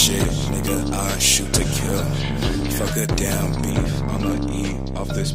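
From 3.71 s to the end, de-emphasis applied wrongly strips treble the sound never had boosted, about 10 dB down at 10 kHz, leaving it dull and muffled.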